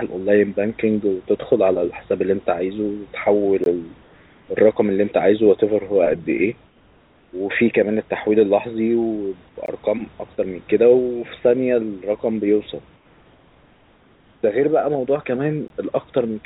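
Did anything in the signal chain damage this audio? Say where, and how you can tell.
Yes. A gap between chunks appears at the storage or playback stage. There are hard-edged 20 ms holes at 3.64, 9.66 and 15.68 s, one at each 6-second chunk join.

Comfort noise replaces the background during call processing. At 4.03–4.48, 6.67–7.33 and 12.96–14.43 s the background goes flat and about 2–3 dB quieter. Discontinuous transmission is the likely cause.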